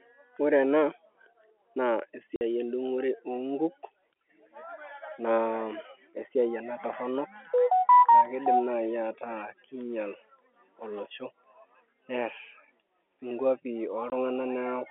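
At 2.36 s, a 50 ms hole of packet loss filled with silence cuts the speech just before "endung'ore oonkuk". A second, 20 ms gap hits at 14.1 s. Both fit 10 ms packets dropped and replaced by silence. Their edges are hard, over a narrow telephone band.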